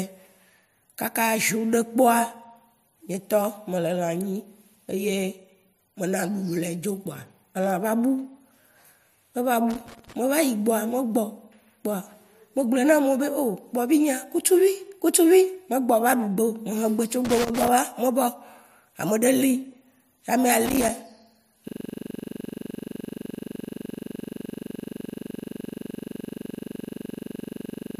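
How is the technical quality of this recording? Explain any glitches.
The recording has two kinds of fault: bursts of crackle in the middle and a freeze that runs to the end.

Loose connector crackle at 9.70–10.15 s, 17.25–17.68 s (just before "me vao") and 20.66–20.89 s: a worn contact breaks and remakes the circuit as it shifts, chopping the speech. Each burst is an irregular scratchy crackle lasting under half a second.

System hang loop from 21.68 s to the end: the software stalled while the audio hardware kept replaying one 42.67 ms slice of its buffer, which fits a 2048-sample buffer. It repeats about 150 times at 23.4 Hz, heard as a machine-gun stutter in place of the speech.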